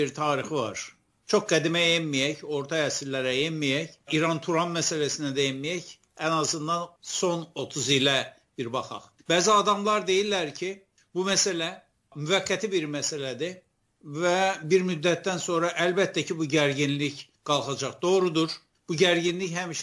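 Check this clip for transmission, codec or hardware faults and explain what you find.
Nothing in the audio points to a transmission, codec or hardware problem; the signal holds steady throughout, with no breaks, distortion or level disturbances to report.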